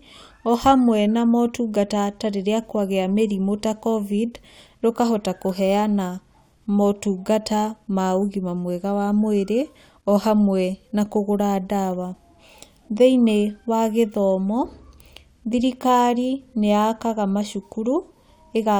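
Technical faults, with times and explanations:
No technical faults are audible anywhere in this speech recording.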